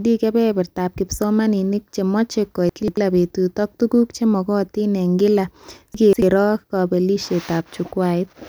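A jumbled moment at 2.69–2.97 s after "kebebertaab kipsomanink chemache", recurring at 5.94–6.22 s after "tuguk chemagatin eng kila": chunks out of order, where one roughly 93 ms block plays two blocks late, leaving hard joins.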